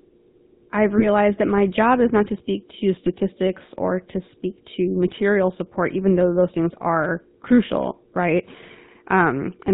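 The whole clip passes through the GSM full-rate codec, whose pulse-driven vocal-tract model and 4 kHz cutoff, consistent with a 13 kbps stream, leave the speech plainly buzzy and gravelly. GSM bit errors then corrupt decoder parameters from 0.98 to 1.06 s, just before "that my job is", and at 3.06 to 3.09 s, right after "not to speak to", producing brief squawks and gargling.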